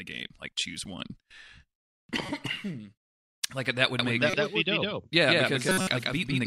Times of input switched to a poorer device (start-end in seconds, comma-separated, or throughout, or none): none